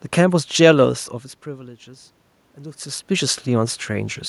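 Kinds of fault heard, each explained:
Automatic gain rising: the level reaching the gain control dropped by about 19 dB, so the control judged the input too quiet and raised its gain by about 4 dB, slowly and steadily, from 1.46 s to 4.24 s. The boost applies to the whole microphone signal, so the room noise swells along with the speech. The rise is a gradual creep over nearly three seconds rather than a step.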